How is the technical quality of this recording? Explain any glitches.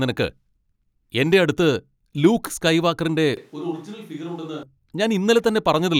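One glitch stands out. From 3.37 to 4.63 s the speech turns roomy, thin and roughly 10 dB quieter, with more background noise. It sounds like a switch to a distant microphone, likely after the close one dropped out. It snaps back abruptly.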